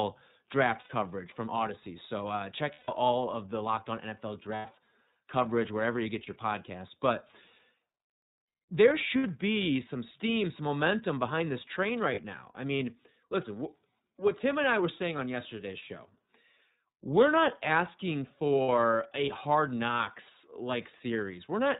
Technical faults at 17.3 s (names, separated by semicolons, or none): iLBC codec